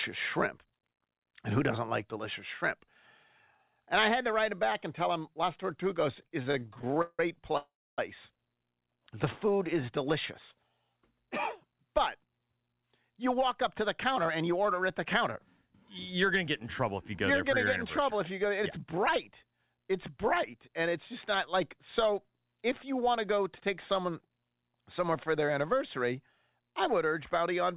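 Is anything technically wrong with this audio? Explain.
Yes. This speech has several jitter-buffer faults on a call path, and that path, which sounds like G.711 mu-law at 64 kbps, leaves nothing above 4 kHz.

From 6.19 to 7.54 s there are repeated stalls (stutter). Packets kept arriving late, so the buffer emptied 18 times. The receiver stretched the last sound to fill about 421 ms, the longest wait 170 ms. The speech drags and stutters.

From 7.57 to 7.99 s comes a call audio freeze, likely from packets held up in transit. About 404 ms was filled by a fading continuation ending in roughly 280 ms of silence, then speech resumes where it stopped.

From 9.15 to 9.87 s a jitter buffer slow-down repeats single pitch periods to rebuild the reserve, adding 57 ms. Speech runs at 93% speed with unchanged pitch and drawn-out sounds.

From 11.84 to 15.37 s and again from 18.64 to 19.68 s a jitter buffer speed-up trims pitch periods to shed excess delay. 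It removes roughly 200 ms and then about 70 ms, so speech runs at 106% speed and sounds hurried.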